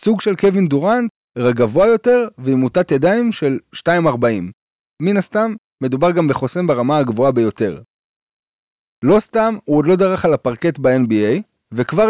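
No audible technical faults occur anywhere in this recording.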